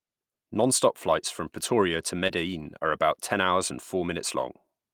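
At 2.27 to 2.31 s, just before "are about ten hours", the speech briefly smears and wobbles for a moment before settling. This is short concealed packet loss. About 20 ms of audio failed to arrive in time, and the receiver covered the gap by extending the preceding sound for about 18 ms, then cross-faded back into the real signal. The join comes across as a blur rather than a clean cut.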